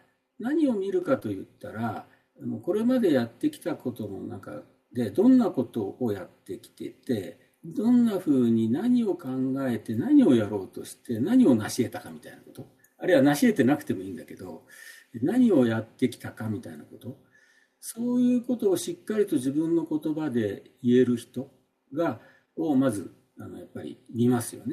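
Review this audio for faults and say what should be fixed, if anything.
At about 1.02 s there's a microphone volume step up. The call software decided the mic was too quiet and bumped the device's input gain in one go, so the voice and background jump together by about 4 dB. Turning off automatic mic gain control, or setting the level properly beforehand, would stop that jump.

Right after, from about 1.19 to 1.23 s, there's short concealed packet loss. Roughly 20 ms of audio didn't reach the decoder in time, and the receiver papered over about 16 ms by extending the preceding sound before blending back, which leaves a quick smear. A steadier network path or a bigger jitter buffer would cut down on those gaps.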